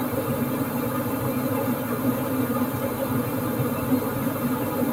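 A recording of everyday sounds, with no technical faults to report. Nothing in the audio points to a problem in how it was captured or delivered.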